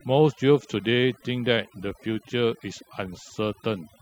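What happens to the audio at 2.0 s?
At 2.0 s two faults are present, and both run through the whole clip rather than starting there. The first is mains buzz: interference from the 60 Hz power supply, likely entering through a dimmer, rectifier or unshielded cable, injects sharp switching spikes twice per cycle. Those spikes carry a ladder of 60 Hz harmonics up into the kilohertz range, so a steady, raspy buzz sits under the speech, roughly 20 dB below it.

The second is overdone noise removal: a noise reduction stage was pushed too hard, so any frequency band that drifts close to its noise estimate is cut deeply or switched off entirely. Quieter components of the speech fall below that threshold and vanish along with the noise. The background between syllables collapses toward near-silence sprinkled with twinkling, chirpy specks.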